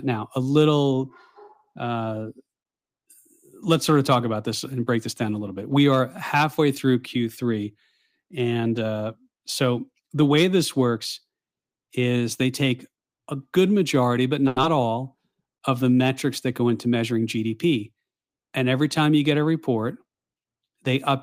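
At 14.47 s a short stall from a late packet begins and lasts until 14.58 s. The packet arrived late and the jitter buffer ran dry. The decoder held the last speech sound for about 90 ms. Nothing is lost, but the sound drags with a faint buzz or dip.

Right after, from 14.62 to 14.65 s, there is a short concealed packet loss. About 40 ms of speech never arrived in time. Only about 10 ms was filled by extending the previous sound before rejoining the real signal. The result is a quick smear or wobble. The lost audio also shortens the built-up delay by about 30 ms.

From 16.52 to 17.46 s a jitter buffer speed-up plays the speech at 108% of normal pace. The buffer was holding more audio than it should. The receiver trimmed many short pitch-period slices, about a tenth of a second in total. Pitch stays the same, but the speech sounds hurried.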